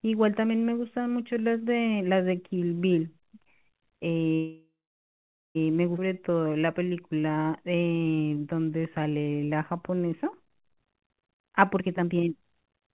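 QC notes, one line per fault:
4.34 to 5.57 s, call audio freeze: the sound stops moving and the last bit of it hangs on as a fading buzz, then drops to near silence for about 0.86 s of the 1.21 s gap. This is most likely packets stalling in transit so the jitter buffer ran dry and the receiver padded with a decaying copy of what it last had. When audio resumes it picks up right where it left off, so nothing is lost, it's just pushed later by about 1.2 s.
5.97 s, skip ahead: playback jumps forward almost seamlessly, with only a tiny 9 ms patch at the join, but roughly 0.7 s of material is gone. That's a stretch of audio dropped while later audio was already waiting, so it cuts straight from one side of the missing stretch to the other. You hear an abrupt splice rather than a pause, and it claws back around 0.7 s of delay.
6.06 to 10.75 s, jitter buffer slow-down: over this stretch the speech plays at about 89% speed while the pitch stays put, because the receiver keeps repeating single pitch periods and bits of pauses to rebuild its reserve. 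In total it inserts about 529 ms. The effect is drawn-out vowels and a slightly dragging, elastic delivery.
10.74 to 12.94 s, jitter buffer speed-up: right as the slow-down ends the buffer has overshot its target, so the receiver starts snipping out short pitch-period-sized pieces over and over to shed the extra delay, roughly 0.7 s in all. Speech runs at about 135% speed with pitch unchanged, which comes across as noticeably rushed, like the talker is hurrying through to the end of the clip.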